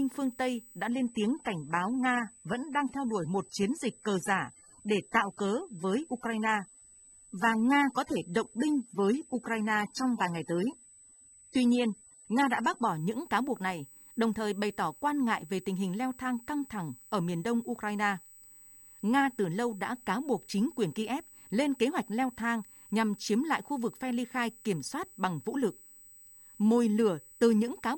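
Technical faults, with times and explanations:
Throughout: USB whine, a fixed-pitch tone at 8 kHz with its strongest component at 16 kHz, sitting about 25 dB below the speech. The bus's 125-microsecond microframes draw current that leaks into the audio through power or ground, drawing steady horizontal lines across the spectrogram at both frequencies.
0.88 to 12.88 s: adaptive stream at a lower bitrate, so the treble is duller and codec artefacts are more prominent until quality jumps back just before "những cáo buộc này". A slowed connection likely pushed playback onto a lower-rate version, which fits a drop from roughly 96 to 24 kbit/s AAC. The spectrogram shows nothing above 12.5 kHz there, then a sudden return with no gap in the waveform.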